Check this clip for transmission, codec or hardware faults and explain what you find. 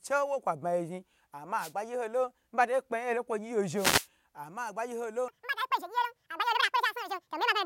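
Two kinds of fault are present: two wireless microphone noise hits and a section at the wrong speed.

The first wireless microphone noise hit runs from 1.57 to 1.73 s, just after "kwa ba yi zhni". The second runs from 3.75 to 4.08 s, between "nkwo gyi" and "ama agbayi ho". Each time the FM radio link fades as reflected paths cancel, and receiver hiss rises. This is heard as a brief swish of static. On a spectrogram it shows as a broadband vertical smear of noise, and on the waveform as a ragged, noisy patch.

From 5.28 s to the end of the clip, after "ama agbayi ho", the speech plays at the wrong speed, about 1.96 times too fast. Speed and pitch rise together, so the voice turns hurried and chipmunk-like, roughly ten semitones higher. The likely cause is a section played or edited against the wrong clock. On a spectrogram the harmonics and formants jump upward and spread apart at 5.28 s. 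On the waveform the syllables become compressed and crowded.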